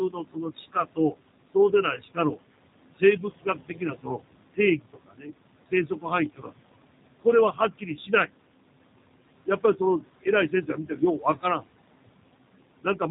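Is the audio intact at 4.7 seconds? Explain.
No. From 4.54 to 5.32 s the noise suppressor cuts into the speech: it mistakes part of the talking for background and pulls it down by about 21 dB at its deepest, over roughly half a second. The affected sounds come out swallowed and faint. Unlike a dropout, the level sinks rather than falling to silence, and the room noise sinks along with it.

That moment also carries noise suppressor artifacts present throughout. With the room noise about 15 dB under the speech, the suppressor lowers it by about 21 dB, so the noise sinks between the words and rises under them. This pumping follows the level of the sound, which separates it from steady codec roughness.

The G.729 codec is also plainly audible throughout at 8 kbit/s. Nothing above 4 kHz gets through, and the speech is rebuilt from a coarse pulse model, so it sounds rough and synthetic. This is more than simple band-limiting.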